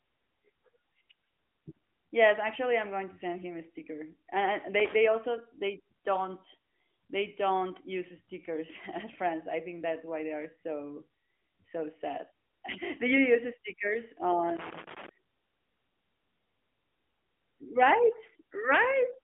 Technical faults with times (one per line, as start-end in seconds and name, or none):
4.80-4.95 loose connector crackle
14.49-15.09 loose connector crackle